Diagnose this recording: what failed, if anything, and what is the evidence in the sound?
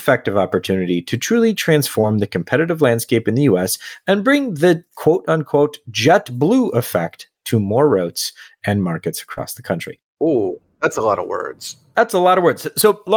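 Short concealed packet loss, network stage, at 2.01–2.05 s after "opportunity to truly" and 9.33–9.39 s after "more routes and markets": the decoder stretched preceding sound over 20 and 40 ms gaps, leaving brief smears.

Lost packet rebuilt from error correction, codec stage, at 2.03–2.05 s and 9.37–9.43 s: one then two packets were replaced by low-bitrate Opus in-band copies, which sound briefly rougher and noisier.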